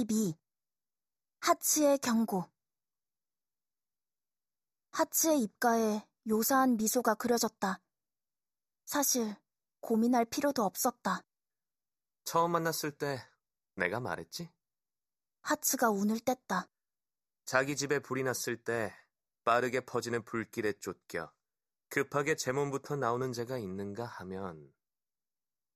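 Throughout the speech, channel delay causes comb filtering: one channel runs a fraction of a millisecond late, and summing to mono cancels evenly spaced frequencies, the first around 3 kHz. The sound is thin and hollow, and a spectrogram shows fixed dark horizontal notch bands.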